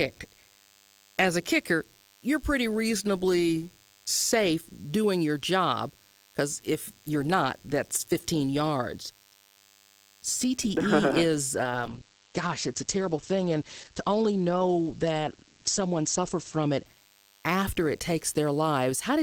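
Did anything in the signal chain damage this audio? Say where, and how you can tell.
Yes. In the analogue wiring, a DECT cordless phone buzz is being rectified throughout: a thin, steady 100 Hz buzz rich in harmonics, around 35 dB below the speech.

From 11.56 to 17.99 s, a call bitrate drop pushes the codec from 32 to 11 kbps. Bandwidth shrinks from 20 kHz to 8 kHz, leaving the speech muffled and coarse.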